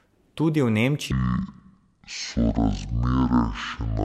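A speech recording with a section at the wrong speed. From 1.11 s to the end at 4.05 s, playback runs at 0.529 times normal speed. The voice drops about ten semitones and drags. A likely cause is the section being played against the wrong clock.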